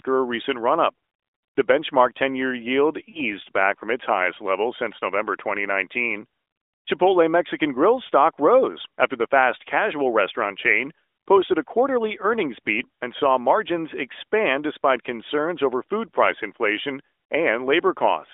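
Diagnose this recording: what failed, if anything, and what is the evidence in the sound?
Between 3.10 and 3.21 s, just before "back from its highest", the speech smears into a brief, fading drawn-out sound, then returns rough. These are lost AMR speech frames: radio errors in the network corrupted data, and the decoder replayed the last good pitch and vocal tract settings with falling gain, which fits two missing 20 ms frames.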